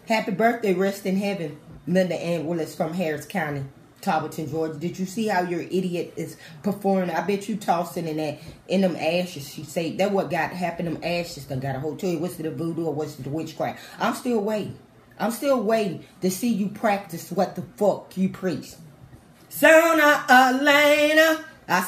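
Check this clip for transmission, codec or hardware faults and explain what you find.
No transmission, codec or hardware faults turn up anywhere in this clip.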